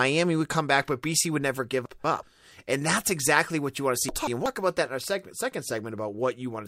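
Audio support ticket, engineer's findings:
Chunks out of order, two instances in speech: 1.86–2.23 s and 4.09–4.46 s. Symptom: brief jumbled stretch. Mechanism: one block of about 186 ms delivered one block late, playing after its successor; nothing dropped, sequence swapped, three discontinuities per event. Probable component: block queue or writer reordering, consistent with roughly 186 ms chunking.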